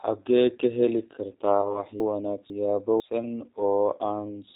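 Throughout, the speech carries plainly audible G.729 codec damage: an 8 kbit/s model rebuilding each 10 ms frame from filter and pulses, giving a rough, synthetic edge rather than broadband hiss. From 1.61 to 1.81 s, VoIP packet loss concealed by the speech codec turns a gap of about 20 ms, consistent with one lost packet, into a fading extension of the last sound. The voice stays weak after it, unlike a clean dropout. From 2.0 to 3.0 s, chunks out of order swap two 500 ms blocks, the late one playing after its successor. Nothing is missing, but the jumbled sequence and hard joins set it apart from a repeat or skip.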